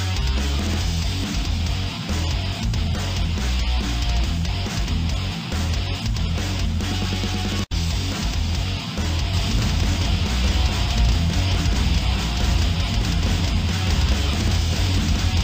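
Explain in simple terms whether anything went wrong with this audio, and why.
Something went wrong from about 9.3 s onward: a doubled audio track. The same audio was most likely picked up a second time by a slower route, so two copies got mixed together out of step. From that point to the end, every sound repeats about a second and a half later, at roughly the same loudness as the original. The repeat is clean, with no fading or room echo, and it switches on abruptly.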